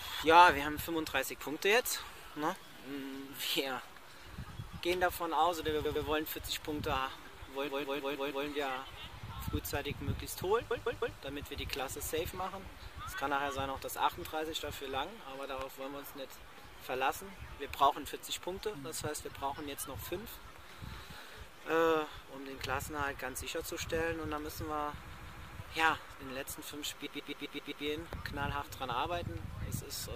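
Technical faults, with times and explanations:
5.84–6.05 s, 7.67–8.45 s, 10.70–11.17 s, 25.09–25.56 s and 27.05–27.84 s, repeated frames: a block of 0.10 to 0.16 s plays again two to six extra times, stuttering. This fits a short run of compressed frames duplicated in the stream. Unlike a dropout, nothing goes missing, and the clip runs longer by the repeats.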